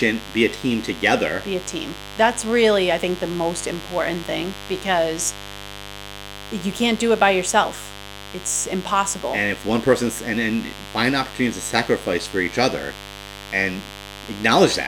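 A raspy mains buzz runs through the entire speech, about 15 dB below it: 50 Hz switching spikes spread harmonics into the kilohertz range, unlike a smooth low hum.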